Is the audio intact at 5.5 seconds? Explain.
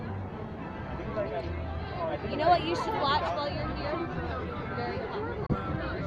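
No. A Bluetooth dropout runs from 5.46 to 5.54 s, right across the 5.5-second mark. The output falls silent, with abrupt edges or a fade of a few milliseconds, and the sound comes back later in its timeline rather than where it stopped, as though it had kept playing underneath. The likely cause is wireless packets arriving too late for the headphones to use, so they were discarded. The size of the hole fits about two lost frames.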